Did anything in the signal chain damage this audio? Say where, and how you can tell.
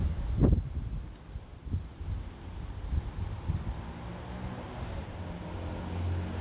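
No, nothing in the chain damaged these sounds; they came over a call path whose codec leaves nothing above 4 kHz, which is just how a narrowband G.711 telephone link normally sounds.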